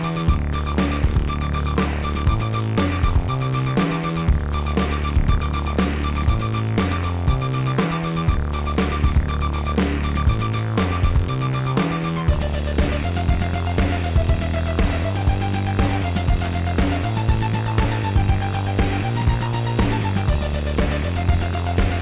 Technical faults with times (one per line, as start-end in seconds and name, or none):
none